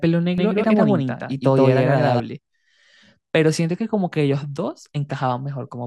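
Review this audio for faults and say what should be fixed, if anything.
From 0.38 s to 2.2 s the speech is heard twice: a second, full-band copy trails the original by roughly 150 ms at close to equal level, with no decay or room colour, so it reads as a clean repeat rather than reverb. It appears and vanishes abruptly at those boundaries. This doubled audio track is likely caused by the same signal being picked up again through a slower path, such as a monitoring return or a second capture route, and mixed in with the direct feed. To prevent it, make sure each source reaches the mix through exactly one route and mute any parallel or loopback path feeding the recording.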